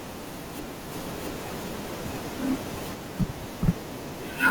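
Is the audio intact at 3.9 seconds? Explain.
Yes, at 3.9 seconds the speech runs on cleanly, with no dropout, click, distortion or other audible break.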